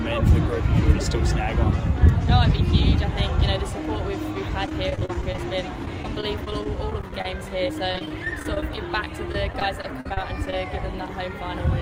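Repeated packet loss (robotic sound) occurs from 4.66 to 5.39 s, 5.85 to 7.37 s and 7.68 to 10.66 s. Short chunks drop out again and again, each hole patched by extending the preceding sound, so the audio turns choppy with pieces missing, with gaps up to 44 ms.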